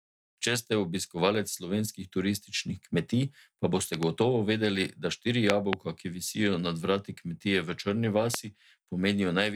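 A sudden voltage step, likely from a plug, switch or static discharge, enters the signal path three times and is heard as a loud pop over speech that carries on underneath. At 3.94–4.05 s, between "turističnih kmetij pa" and "gotovo vedeli da štiri", a double pop peaks roughly 15 dB above the speech. Just after "gotovo vedeli da štiri", at 5.50–5.75 s, a harder double pop rises about 25 dB above it. A single sharp pop at 8.34–8.36 s stands out by about 20 dB.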